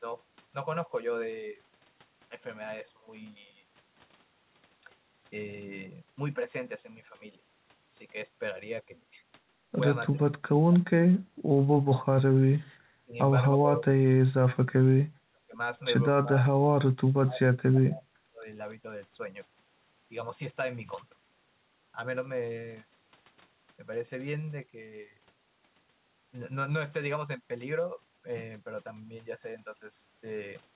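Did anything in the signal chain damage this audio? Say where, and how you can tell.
Yes, at the call-processing stage: speech suppressed in double talk at 10.12–10.85, 11.82–12.48, 12.96–13.16, 13.56–13.89, 14.83–15.58, 16.22–18.46 and 18.82–18.87 s. On a spectrogram these show as dark vertical gaps, and on the waveform the envelope collapses by up to about 35 dB. The likely cause is an echo canceller that, while both sides were talking, could not separate the talker from the loudspeaker echo and turned both down.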